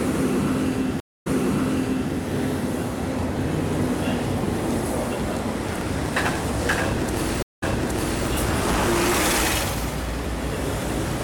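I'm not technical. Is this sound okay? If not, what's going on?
No. Twice, at 1.00 s and 7.43 s, a stream reconnect cuts the sound for about a quarter and a fifth of a second. It then restarts slightly earlier, replaying 0.85 s and 0.62 s, rather than simply dropping out.

From 5.60 to 9.20 s, a block size mismatch (truncated) chops off the end of each chunk. This adds a steady 109 Hz buzz and hurries the sound along about 9% faster at normal pitch, unlike a sped-up recording, which would sound higher.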